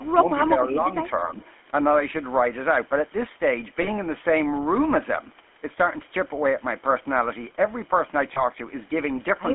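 Throughout, the GSM full-rate codec gives the speech a buzzy, gravelly roughness. On a spectrogram, energy sits within roughly 250 Hz to 3.4 kHz, which fits 13 kbps full-rate coding.

From 0.0 to 0.25 s, the speech dips by about 15 dB, likely speech suppressed in double talk. The waveform shows a brief envelope trough.

At 3.82 s and 8.34 s, lost GSM frames, each about 20 ms, produce a short metallic ring. Spectrograms show smeared, repeated harmonic bands there.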